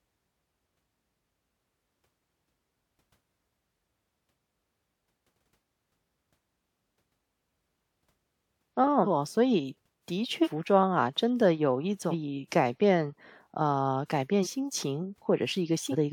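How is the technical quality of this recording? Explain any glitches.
The recording is marred by repeated compressed frames skipped. Runs of whole frames never reach the output, either missing from the file or rejected by the decoder as damaged, so the speech jumps forward. The jumps come at 3.55, 4.53, 5.74, 9.03–9.06, 10.43–10.48, 12.10–12.14, 14.42–14.47 and 15.91–15.95 s. Each loses roughly 300 ms to 1 s of speech, about a second at 5.74 s, in steps that fit a 46.4 ms frame.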